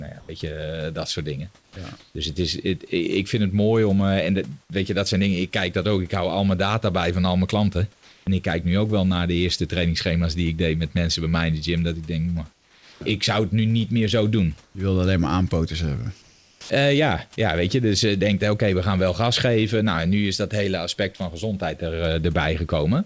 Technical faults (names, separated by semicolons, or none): sound dropped by the voice detector; comfort noise in place of the background; onset clipped by the voice detector